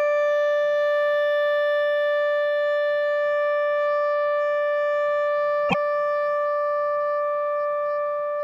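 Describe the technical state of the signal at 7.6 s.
At 7.6 s the signal is intact, with no audible fault at that moment.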